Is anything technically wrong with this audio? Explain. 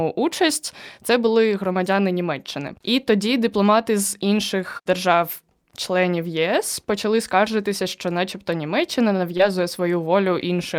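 Yes. Between about 9.37 and 9.41 s there is a short concealed packet loss. About 20 ms of the speech failed to reach the decoder in time, and the receiver bridged the gap by extending the preceding sound before blending back into the real audio. The result is a brief smear rather than the abrupt silence a plain dropout would leave.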